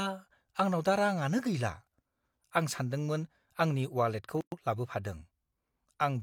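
At 4.41 s the speech halts for 112 ms, a gap at a join of encoded pieces: separately encoded segments were joined with their encoder delay and last-frame padding left in. Unlike a dropout, nothing is lost. Speech resumes at 4.52 s where it stopped, with smeared edges.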